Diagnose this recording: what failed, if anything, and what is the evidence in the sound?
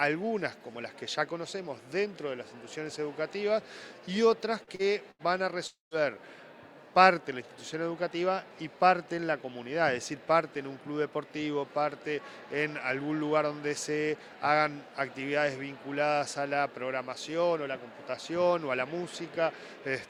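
The network path failed, starting with short concealed packet loss. Two brief smears sit close together, at 4.63 to 4.70 s and 4.75 to 4.82 s. Each covers about 40 ms of audio that never reached the decoder in time. The receiver patched each hole by carrying the preceding sound forward, then cross-faded back into real audio. The result is a quick wobble rather than a clean gap.

Next comes a burst of packet loss at 5.11 to 5.22 s. Here about 80 ms went missing in one run, too much for a seamless patch. The concealment extends the last sound and lets it decay across the gap. It is heard as a held buzz or fading hiss. The audio then picks up further along, and the material in between is gone.

At 5.67 to 5.94 s the sound stops properly for about a quarter of a second. The last sound is stretched and fades. Roughly the final 150 ms is plain silence before audio returns further on. About 240 ms is missing outright. 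The pattern of fill, fade, silence and a jump forward most likely comes from a long network dropout, the worst of this clustered run of losses.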